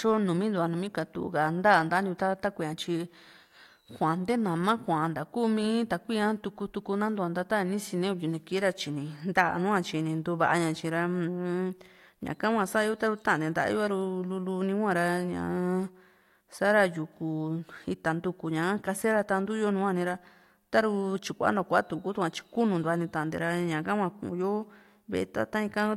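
Nothing in this speech recording stands out as a technical fault, so there's nothing to pin to a timestamp here.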